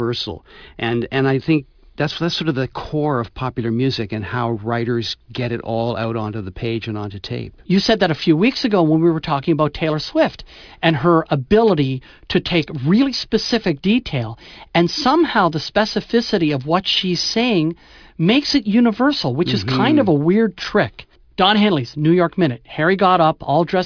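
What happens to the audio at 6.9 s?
Nothing goes wrong at 6.9 s; the speech carries on intact through that moment, with no dropout, click or distortion to be heard.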